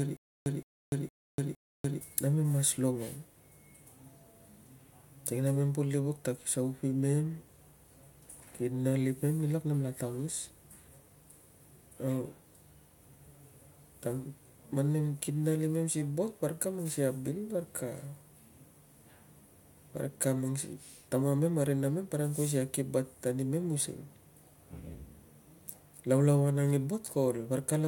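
From the very start until 2.01 s, a stutter with silent gaps: a 167 ms fragment of speech repeats four times, each followed by about 294 ms of digital silence, every 461 ms, likely a stalled stream replaying its last buffer. The waveform shows identical bursts separated by flat silent gaps.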